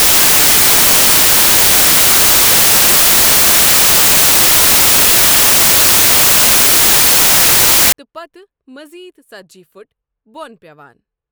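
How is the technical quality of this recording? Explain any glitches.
The recording has one serious fault. Samples built from the wrong bytes, 0 to 7.92 s: the reader misassembles each sample's bytes, so fast-changing low bits dominate, producing loud, harsh broadband noise, close to white on loud sounds.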